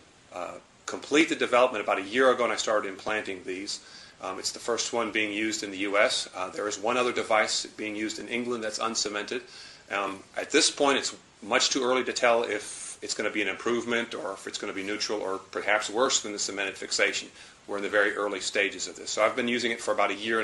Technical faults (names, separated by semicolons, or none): none